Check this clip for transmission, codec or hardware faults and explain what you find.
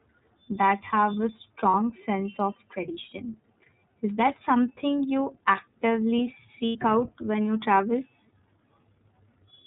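You've got two things going on here: the whole clip runs through the iLBC codec, and there are two short dropouts where iLBC frames were lost.

The iLBC codec colours the entire speech clip. It's narrowband, so nothing above 4 kHz survives, and each 30 ms frame's excitation is coded independently. The damage is plainly audible as a slightly rough, synthetic edge, which fits iLBC's 30 ms mode at around 13.3 kbps.

The lost iLBC frames show up at 1.71 to 1.74 s, between "that have a" and "sense of tradition", and again at 6.66 to 6.76 s, between "that something you actively" and "out when you travel". The first gap is about 30 ms and the second about 90 ms, which points to one and three missing frames. Each time, the decoder filled in by repeating the last pitch cycle with some noise mixed in. You hear a brief held, slightly buzzy vowel. The speech snaps back right away because iLBC frames don't depend on each other.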